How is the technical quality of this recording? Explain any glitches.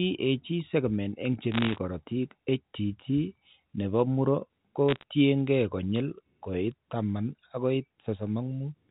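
The recording has two short bursts of bit errors on a digital phone line, heard through narrow telephone-band G.711 coding with nothing above 4 kHz.

Bit errors on a digital phone line, 1.52 to 1.78 s, just after "segment eng' che", and 4.89 to 5.03 s, after "ne po muro ko". Flipped bits, around half to one percent, corrupt individual samples, scattering sharp ticks and crackle over the unchanged speech.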